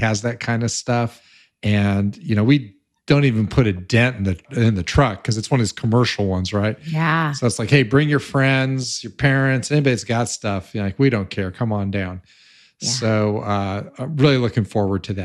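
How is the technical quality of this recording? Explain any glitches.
Nothing in the recording stands out as a glitch, so there's no technical problem here to explain.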